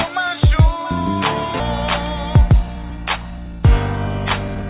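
From 2.16 to 3.61 s the sound runs hurried at unchanged pitch, about 9% fast, and again from 4.48 s to the end at 13%. This is jitter buffer speed-up, where the receiver drained excess buffered audio by cutting short pitch-period slices, roughly 150 ms and then 40 ms.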